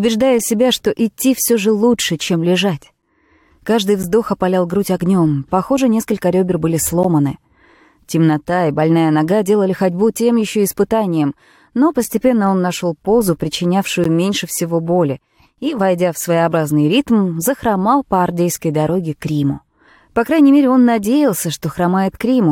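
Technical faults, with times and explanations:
3.02, 4.03, 7.03, 8.04, 12.04 and 14.04 s: gaps between stream segments. Abrupt silences of 3 to 13 ms land on one-second segment boundaries where time stamps leave holes. No sound is lost.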